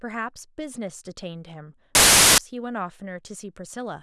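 From 1.95 to 2.38 s the speech is replaced by a burst of loud, harsh broadband noise. This is a case of samples built from the wrong bytes. For this stretch the reader assembles each sample incorrectly, with its bytes offset by one, swapped, or misaligned. The rapidly changing low-order bits end up as the most significant part of each value. The result is dense broadband hiss that swamps the speech.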